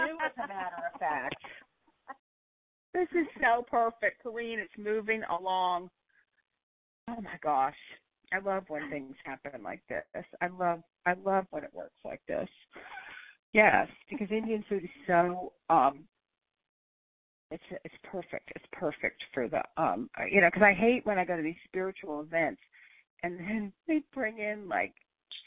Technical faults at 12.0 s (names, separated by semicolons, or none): none